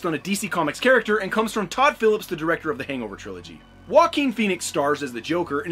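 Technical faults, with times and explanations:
No technical faults can be heard anywhere in this clip. There is nothing in the audio that needs a time or an explanation.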